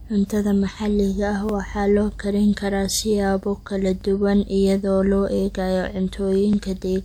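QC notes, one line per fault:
1.49 s, 4.01 s and 6.53 s: overlapping chunks. Every 2.5 s, about 20 ms of audio is played twice, as each chunk starts before the previous one finished. The repeat lands as a brief click or stutter, first after "maxaliga ah", then before "duwan iyadoo loo eegayo".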